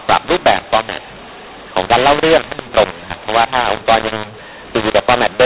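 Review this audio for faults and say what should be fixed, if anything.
The whole clip shows a mu-law and A-law mix-up. The speech was coded as A-law but decoded as mu-law. Levels come out scrambled, speech sounds harsh and distorted, and pauses fill with noise. The G.711 coding itself, at 8 kHz, is fine. Prevent this by declaring the companding law explicitly at both ends.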